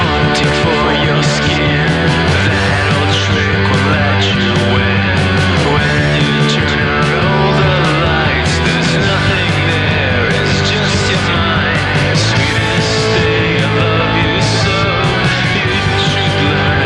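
No technical faults can be heard anywhere in the signal.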